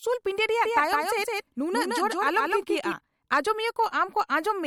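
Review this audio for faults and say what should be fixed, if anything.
A second capture path, likely a slower route or an edit leaving two copies misaligned, is feeding the same speech into the mix twice, producing a doubled audio track from 0.64 s to 2.92 s. The extra copy trails by around 150 ms at roughly the same level as the original, with full bandwidth and no decay or room colour, so it sounds like a hard slapback rather than reverb. It switches on and off abruptly at those times. To prevent it, route each source through only one capture path and check edits for overlapping duplicate regions before bouncing.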